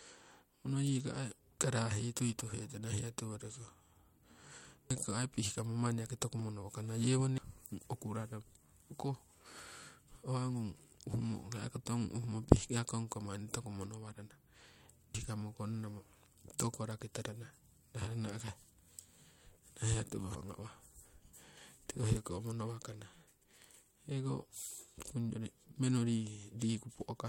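At 1.58 s, just before "karahii tui", and again at 4.91, 7.38 and 15.15 s, damaged data in the compressed stream makes the decoder misread a frame and lose sync, giving a brief chirp, squawk, click or short hole.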